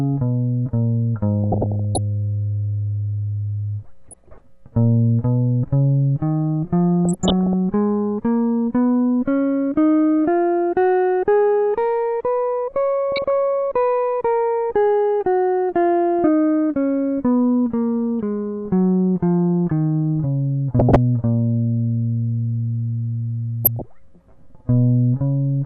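Throughout, the music sounds dull and granular with a gurgling texture, likely MP2 compression at a rate around 80 kbps, with upper sub-bands switched off and the rest coarsely quantised. DAB burbling occurs at 1.44–1.98 s, 4.08–4.41 s, 7.05–7.53 s, 13.12–13.28 s, 20.79–20.96 s and 23.65–23.84 s. A small fraction of bit errors get past error correction, putting short blips of noise into single sub-bands.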